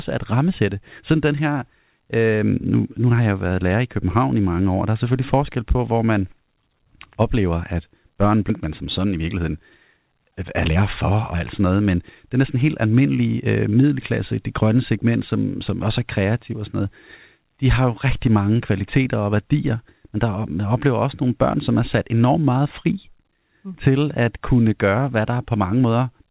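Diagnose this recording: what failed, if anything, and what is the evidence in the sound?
At 8.5 s the speech skips ahead: about a second of audio is missing and the two sides are joined directly, with nothing filled in. This is a network or jitter-buffer discard. On the waveform the envelope changes abruptly at the splice, and a spectrogram shows formant tracks breaking off with no gap.

From 8.65 to 14.19 s, just before "det grønne segment som", a jitter buffer speed-up runs the speech at 109% with its pitch unchanged. The buffer repeatedly trimmed pitch periods to shed about half a second of excess delay. On a spectrogram, harmonic spacing stays constant while syllables compress in time, all within the G.711 band that stops at 4 kHz.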